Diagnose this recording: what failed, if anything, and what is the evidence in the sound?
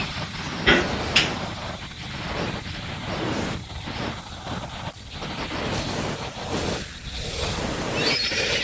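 Automatic gain falling in call processing: from 0.05 to 0.75 s, speech and background sink together by about 3 dB as the AGC backs off.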